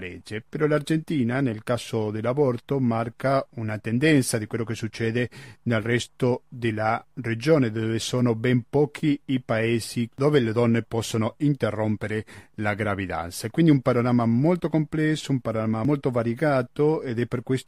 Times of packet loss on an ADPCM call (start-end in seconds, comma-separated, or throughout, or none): none